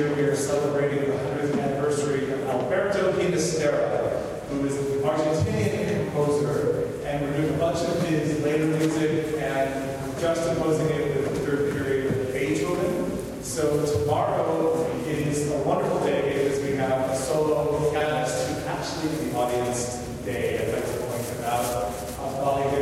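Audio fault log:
9.11–9.16 s, frames out of order: two adjacent single frames, each about 23.2 ms, were decoded in swapped order, so a short garbled flutter plays.
17.95–18.05 s, frames out of order: two adjacent two-frame runs, each 46.4 ms, were decoded in exchanged order, giving a longer scrambled flutter and no lost time.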